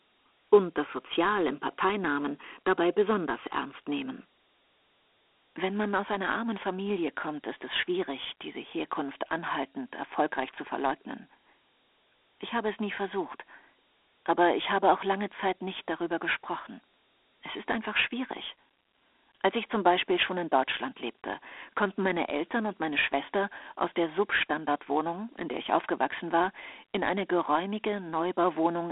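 Throughout, the speech was stored as Dialogic VOX ADPCM at a rate that fits 8,000 samples a second, so a gritty hiss trails every syllable and nothing survives above 3.8 kHz.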